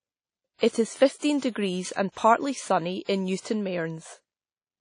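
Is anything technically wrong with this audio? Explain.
Yes. Throughout the speech the sound is washy and ringing, with a hiss that swells and fades along with the talker, and nothing is present above about 10.1 kHz. This is plainly audible WMA compression, likely from an early WMA encoder at a low bitrate, consistent with roughly 32 kbps. Its long transform blocks spread quantisation noise across tens of milliseconds, and weak spectral lines and the upper band are discarded to save bits.

Pre-echo occurs six times: at 1.18 s, 1.38 s, 1.50 s, 2.12 s (just before "sunny in"), 3.03 s and 3.40 s (just after "sunny in"). Before each attack there is a brief hiss lasting about 40 to 52 ms, and the onset itself sounds softened and smeared. The codec spreads its noise evenly over the whole block, so noise sized for the loud attack also fills the quiet moment leading up to it.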